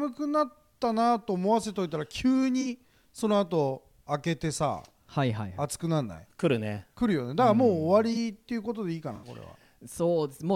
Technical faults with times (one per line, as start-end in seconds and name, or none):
2.61-2.67 corrupt frame concealed
8.13-8.17 corrupt frame concealed
9.15-9.27 corrupt frame concealed